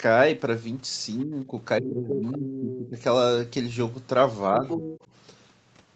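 At 1.25 to 1.56 s the speech dips by about 15 dB for roughly a fifth of a second. This is speech suppressed in double talk, likely caused by the echo canceller failing to tell the local talker from loudspeaker echo and pulling both down together. The heavier episode runs from 1.8 to 2.97 s, with drops of about 20 dB across roughly a second in total. A final, milder dip of about 10 dB comes at 4.5 to 4.83 s. On the waveform these show as sudden notches in the envelope. On a spectrogram the harmonics thin out or break into gaps, with the upper bands fading first. The whole picture is capped near 8 kHz by the Opus call path at 32 kbps.

Overlapping those dips, the other side's voice is leaking through, likely residual loudspeaker echo the canceller did not remove. A brief scrap at 1.83 to 1.91 s sits about 10 dB below the speech. Longer stretches at 2.08 to 2.87 s and 4.68 to 5.0 s come through only about 5 dB down. 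On the spectrogram the leak appears as a second, fainter harmonic pattern that does not line up with the main talker's.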